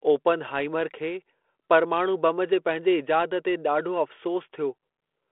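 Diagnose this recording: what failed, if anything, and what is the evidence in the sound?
Nothing has failed here: the speech sits in the narrow telephone band of a 32 kbit/s G.726 link, with nothing above about 3.9 kHz and only the light grain that coding leaves behind, and none of it points to a broken stage.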